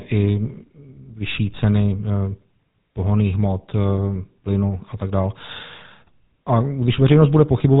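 Throughout, the speech carries GSM full-rate codec damage: regular-pulse excitation modelling gives a plainly buzzy, gravelly texture, and nothing passes above 3.8 kHz, consistent with 13 kbps coding.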